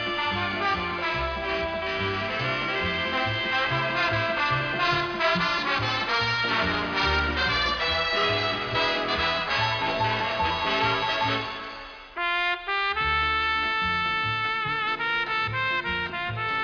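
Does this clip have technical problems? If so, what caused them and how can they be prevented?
No, nothing in this audio stood out as a technical problem on listening, so there is nothing here that needs a cause or a fix.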